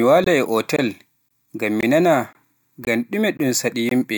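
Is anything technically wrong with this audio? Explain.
Yes. The speech drops into short, hard-edged silent holes of 21 ms at 0.24–0.26, 0.76–0.79, 1.29–1.31, 1.81–1.83, 2.33–2.35, 2.85–2.87, 3.37–3.39 and 3.89–3.91 s. This is a gap between chunks: the audio arrives in 0.5 s chunks, and silence is inserted at each join, so the holes recur regularly.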